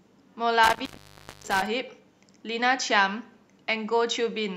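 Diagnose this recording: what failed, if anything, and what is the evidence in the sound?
Intermittent contact in the analogue wiring, between 0.64 and 1.67 s. Within that span the speech drops out, with the line open for about 0.59 s in total, and each break and remake of the connection produces a burst of crackle at its edges. A loose plug or cable conductor briefly loses contact, so the signal path is physically interrupted rather than muted. Faint hiss remains while the line is open, and the speech returns abruptly when the metal touches again.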